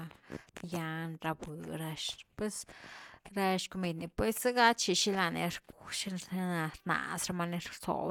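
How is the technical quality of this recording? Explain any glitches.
No glitches turn up anywhere in this speech recording, and there is nothing to explain.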